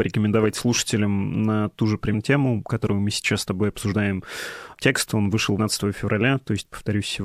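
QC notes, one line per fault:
2.13, 3.91 and 5.58 s, compressed frames skipped: The speech jumps ahead at each point. About a fifth of a second is lost between "слушателям на ту же" and "тему которую мы сейчас", a shorter gap comes after "мы сейчас с тобой", and about a fifth of a second is lost at 5.58 s. Whole coded frames, each about 26 ms, never play. Overlapping neighbours leave a brief smeared blip, not a hard click.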